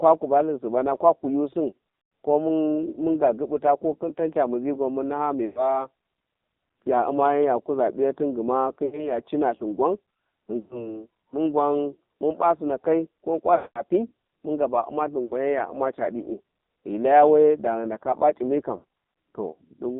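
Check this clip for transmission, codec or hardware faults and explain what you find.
One codec fault runs through the whole clip: AMR narrowband mobile codec damage. The speech was squeezed through 8 kHz mobile coding that models the vocal tract from a few pulses per frame, so only about 0.2 to 3.7 kHz survives, and the heavy buzzy, synthetic texture points to one of AMR-NB's lowest bitrates, around 5.9 kbps.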